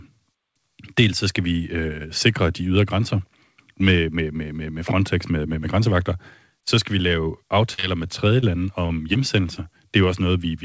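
Right after "skal vi lave", from 7.74 to 9.58 s, repeated packet loss leaves brief holes, the longest about 39 ms, patched by stretching prior audio, making the speech choppy and robotic.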